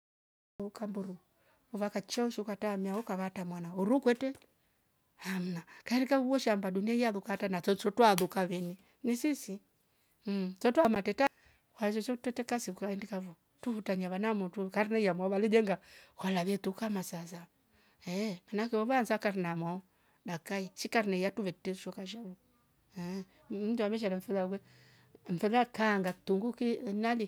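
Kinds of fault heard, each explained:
Cut-off start: pure digital silence until 0.6 s, then speech enters abruptly mid-sound at "mburu vakachounju ukatamia hoka", with no natural attack, because capture began late.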